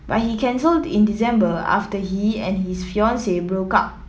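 No technical faults are audible.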